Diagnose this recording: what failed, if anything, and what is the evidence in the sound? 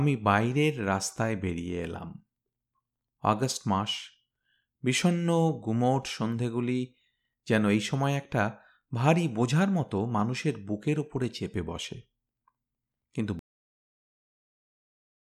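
A cut-off end, at the storage or buffer stage. At 13.39 s the speech stops mid-sound. It drops straight to digital silence with no decay, through to the end. The final buffers were never written to the file, so the sound was truncated rather than faded.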